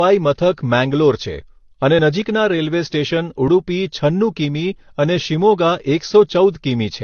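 Throughout, transcoding between lossy codecs, likely low-bitrate AAC then Vorbis, layers both codecs' artefacts over the speech and leaves nothing above 6.6 kHz, so it sounds dull.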